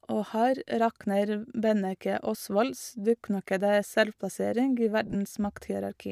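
Lost LE Audio frames, likely on an LC3 link, left the decoder patching gaps with recycled, sign-scrambled spectrum at 0.69 s and 3.48 s, each a 10 ms grainy blip in the speech, and from 5.07 to 5.15 s, where about 50 ms of scattered losses, the longest run roughly 20 ms, smear into a brief noisy stutter.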